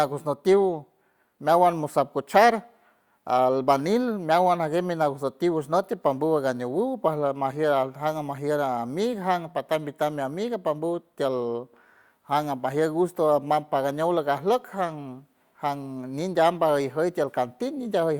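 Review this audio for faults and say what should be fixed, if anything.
Nothing in this speech recording needs fixing. No technical faults can be heard anywhere in it.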